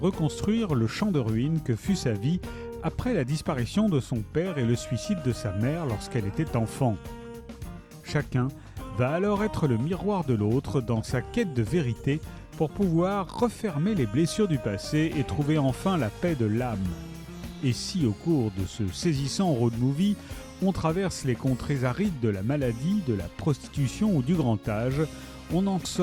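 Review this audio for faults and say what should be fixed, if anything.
No faults; nothing needs fixing.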